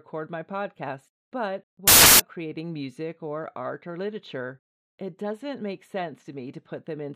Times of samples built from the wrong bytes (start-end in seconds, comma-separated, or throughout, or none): 1.88-2.20